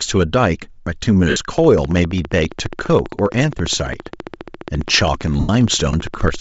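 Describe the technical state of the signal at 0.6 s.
At 0.6 s, as across the whole speech clip, the upper band is grainy and breathy, with plainly audible codec damage. This is likely Bluetooth LC3 compression, which discards much of the high spectrum and fills it with noise, consistent with a low bitrate near 32 kbps.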